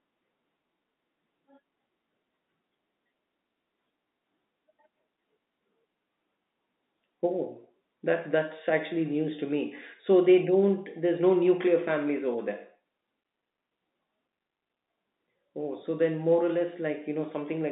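No faults found in the speech; the telephone-band G.711 path passes roughly 200 Hz to 3.7 kHz with nothing heard above 3.8 kHz, as expected for that coding.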